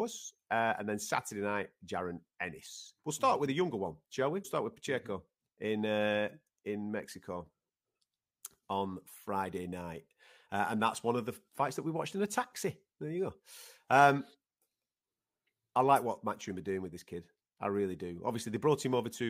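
At 0.77 s, a corrupt frame was decoded. Damaged bits in one frame put energy at wrong frequencies, giving a faint blip. Compressed frames are skipped at 2.65–2.67 s and 4.41–4.45 s. The audio jumps ahead roughly 20 ms, then roughly 150 ms.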